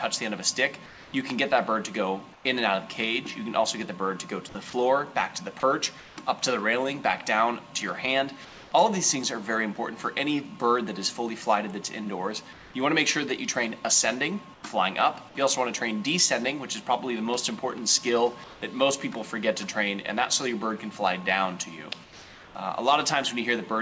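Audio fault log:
0.86–2.45 s, 8.45–8.72 s, 12.53–12.74 s, 14.54–14.63 s, 18.44–18.62 s, 22.04–22.55 s, comfort noise in place of the background: pauses turn into flat, featureless hiss, often about 2–4 dB quieter, likely from discontinuous transmission filling silence with synthetic noise.
4.70–6.17 s, sound chopped by the voice detector: choppy sound with holes where parts were replaced by comfort noise, likely because the voice detector repeatedly toggled transmission off and on.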